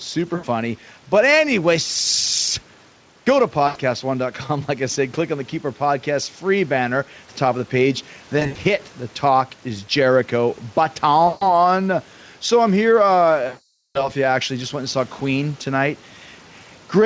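Throughout the speech, gain pumping: the gain swings by around 5 dB, likely from excessive gain driving a fast limiter. VoIP packet loss concealed by the speech codec occurs at 0.35–0.45 s, 3.67–3.77 s, 8.39–8.58 s after "top of the page", 11.27–11.55 s, and 13.47–14.09 s after "I'm here". The decoder extrapolates the last pitch and spectral shape into a buzzy tone or coloured noise that fades. The final gap is the longest at 480 ms, and the 8.39 s one is scattered over 160 ms, consistent with 20 ms frames.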